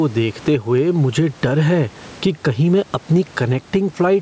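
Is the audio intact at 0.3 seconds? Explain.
No. At 0.3 s, as throughout the clip, there is gain pumping, with a level swing of around 15 dB, and the speech sounds squashed and flat in dynamics. The likely cause is gain set far too high for the microphone, with a fast limiter or compressor pulling the level down on every loud peak and releasing it in the gaps.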